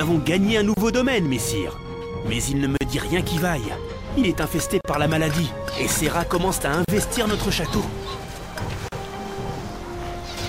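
Brief dropouts of about 30 ms at 0.74 s, then about 38 ms at 2.77, 4.81, 6.85 and 8.88 s, recurring every 2 s, are gaps at joins of encoded pieces, where untrimmed encoder delay and end-frame padding were spliced in.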